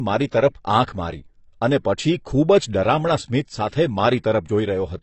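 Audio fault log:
Throughout: AAC compression. The speech has nothing above 8.1 kHz and clearly audible codec damage, with a dull, smeared top and a warbling, fizzy edge on sibilants and held sounds. This is likely AAC-LC encoding at a low bitrate, which fits roughly 24 kbps. With so few bits per frame, the encoder discards the upper band entirely and quantises the remaining spectral lines coarsely. That leaves gaps and noise-filled bands that shift from frame to frame.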